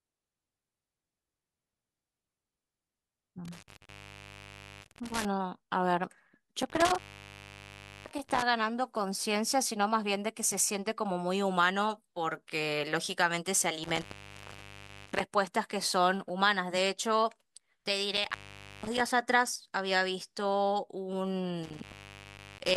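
The speech drops out from an intermittent contact at 3.45–5.25 s, 6.62–8.42 s, 13.84–15.21 s, 18.17–19.00 s and 21.63–22.77 s. A loose connection opens for 0.49 to 1.07 s each time. Crackle marks the edges. Faint hiss fills the gaps.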